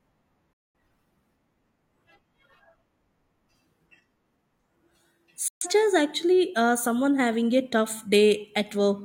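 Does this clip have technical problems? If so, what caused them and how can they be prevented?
Yes. This speech clip has two digital broadcast dropouts, at 0.53 to 0.79 s and at 5.48 to 5.67 s. In each, the receiver stopped getting decodable frames and muted, with a fade of about 3 ms, until good frames returned. The gaps fit roughly five and three lost frames. On a waveform these appear as flat near-silent stretches with near-vertical edges. On a spectrogram they are full-band blank columns. Better reception, through antenna placement, signal strength, or stronger error protection, would prevent them.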